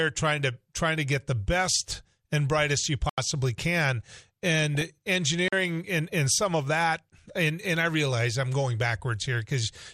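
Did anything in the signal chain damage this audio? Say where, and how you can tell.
Yes. MP2 compression is audible throughout, at the codec stage. The speech sounds dull and gurgling, with flickering upper bands, which points to MP2 coding at a low rate, likely around 80 kbps.

Blocks of digital silence, at the driver or buffer stage: from 3.09 to 3.18 s, just after "best and brightest you", an 85 ms hole cuts in with no fade, which fits a 4096-sample buffer going unfilled. At 5.48 to 5.53 s, just before "and and some of", a 43 ms hole fits a 2048-sample buffer.

DAB burbling, at the network or broadcast reception stage: from 4.75 to 4.88 s, burbling appears across 10 frames as a small rate of bit errors corrupts MP2 frames, putting short blips of noise in single sub-bands.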